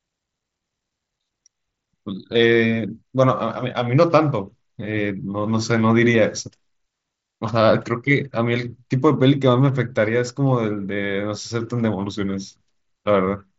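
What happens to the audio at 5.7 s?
Nothing goes wrong at 5.7 s; the speech carries on intact through that moment, heard through the band-limited sound of the Bluetooth mSBC headset link.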